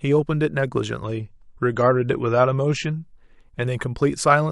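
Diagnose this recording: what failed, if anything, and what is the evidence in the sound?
At the network stage, an adaptive stream at a lower bitrate: from 1.04 to 3.04 s the speech abruptly loses everything above 9 kHz and codec artefacts rise, consistent with a switch from roughly 128 to 32 kbit/s MP3. Unlike a dropout, there is no gap, only a sudden quality step.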